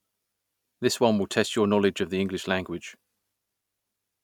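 Nothing stood out on listening to this speech clip.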